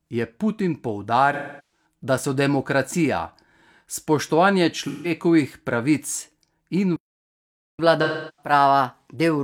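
AAC frame loss with concealment first appears from 1.33 to 1.85 s. The decoder lost about 384 ms of compressed audio, which fits a run of roughly nine frames, and patched the gap by reusing and reshaping the last good spectrum. The speech turns smeared and hissy, with a hollow, phasey colour, before clean decoding resumes. A shorter loss of about 171 ms, between 4.87 and 5.11 s, produces a briefer patch of the same blurred, noisy texture.

A playback stall follows at 6.96 s. The speech cuts off mid-flow and the output stays silent for about 825 ms, until 7.79 s. The likely cause is that the player's buffer ran dry and it had to wait for data before it could continue.

Catch-up at higher speed begins at 7.79 s and runs to the end of the clip. To recover the time lost in the stall, the player resamples its backlog at 1.1 times normal speed. The speech sounds hurried and raised by about one and a half semitones.

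Within this sped-up stretch, AAC frame loss with concealment strikes again from 8.03 to 8.52 s. About 341 ms is concealed, which points to around eight lost frames, and the fast, pitch-raised speech dissolves into the same smeared, noisy wash.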